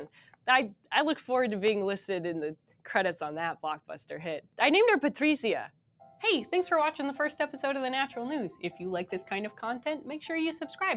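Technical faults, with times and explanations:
Throughout: noise suppressor applied to music or sounds. A speech-tuned suppressor treats steady tones and tails as noise, so level swings by roughly 5 dB and the sound pumps.
0.08–0.47 s, 2.56–2.82 s and 5.69–6.01 s: sound cut by the noise suppressor. Held or fading sound is mistaken for noise and pulled down by up to about 12 dB for roughly 0.2–0.3 s, so decays sink abruptly.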